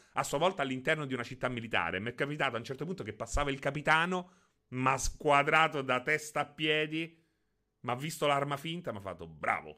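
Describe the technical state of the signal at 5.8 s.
At 5.8 s the audio is intact, with no fault of any kind present at that moment.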